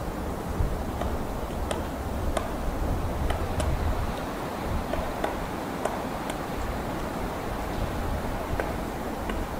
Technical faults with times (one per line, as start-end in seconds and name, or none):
none